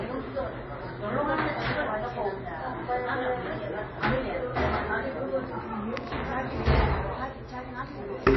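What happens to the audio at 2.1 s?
At 2.1 s the audio carries the same damage heard throughout. Nothing sounds above 5.8 kHz, and the texture turns watery and swirly. This is likely MP3 compression at a very low bitrate, where starved frequency lines flicker frame to frame.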